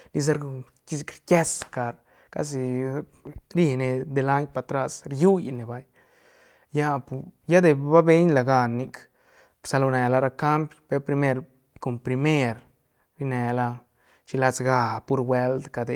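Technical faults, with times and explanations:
Nothing stood out on listening to this speech recording; no technical faults were heard at any point.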